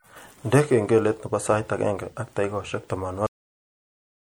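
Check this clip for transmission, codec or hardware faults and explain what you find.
Two faults are present: compression damage throughout the speech, and an abrupt cut-off end.

MP3 compression is the likely cause of the damage heard from start to finish. The codec splits the sound into narrow frequency lines. It spends its limited bits only where its hearing model says they matter. Weak lines are dropped, and they flicker on and off from frame to frame. The damage is plainly audible, as a watery, swirling texture and smeared attacks. The strength of it fits a rate of about 64 kbps. Nothing is heard above 21 kHz.

The cut-off end comes at 3.26 s, just after "sait agenge ak takikaishek". The final stretch of audio was never written or played out. The speech stops in the middle of a sound. There is no natural decay. The level falls straight to digital silence and stays there until the clip ends.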